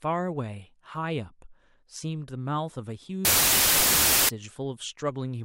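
A wrong sample width runs from 3.25 to 4.29 s. The sound fits 32-bit samples read back as 16-bit, so each sample splits into two values, half of them low-order bytes. That buries the speech in loud hiss and plays it at half speed, an octave lower.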